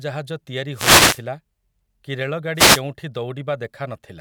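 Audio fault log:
0.72 to 1.22 s and 2.55 to 2.82 s, wireless microphone noise hits: the radio signal fades as reflections cancel. Receiver noise rises into a brief static swish over the speech.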